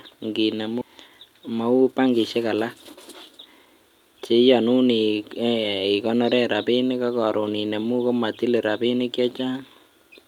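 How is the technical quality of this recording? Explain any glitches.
The recording has two playback glitches in its opening seconds, both from how the stream was delivered.

From 0.81 to 0.83 s there is a skip ahead. About a second of speech is simply missing. That stretch was dropped, either on the way or by the jitter buffer overflowing, so playback jumps forward. The two sides join almost directly, with no gap filled in.

From 0.92 to 4.69 s comes a jitter buffer speed-up. The buffer still held more audio than it wanted. To catch up, the receiver trimmed many tiny pitch-period slices. Speech runs at about 110% speed, at normal pitch, and sounds hurried. Roughly 0.4 s is shaved off.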